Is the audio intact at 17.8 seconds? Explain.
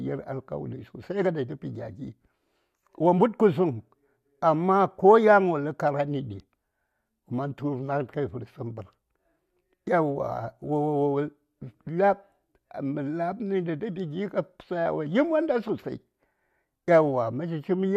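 Yes, the speech at 17.8 seconds is intact, with no dropout, click, distortion or other fault audible at that moment.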